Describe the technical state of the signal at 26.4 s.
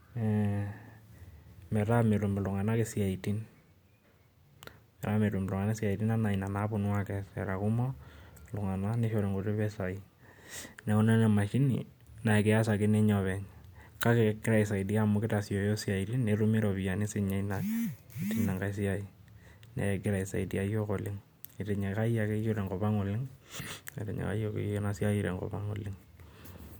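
At 26.4 s the speech signal is intact, with no technical fault audible at that moment.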